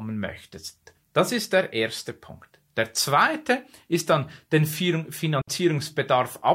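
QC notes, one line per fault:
5.42 to 5.48 s, digital wireless dropout: the speech drops into a clean 60 ms hole of near silence, no crackle or noise burst on either side. That's the receiver losing too much data and muting with a very quick fade.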